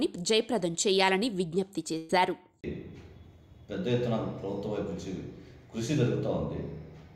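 At around 1.97 s there's a burst of packet loss lasting until about 2.11 s. A short run of packets never arrived in time, so the receiver stretched the last bit of sound it had, about 115 ms of concealment that turns into a held buzz or fading hiss as it dies away. When the audio picks back up, roughly 120 ms of the original material is simply gone, so it jumps ahead slightly.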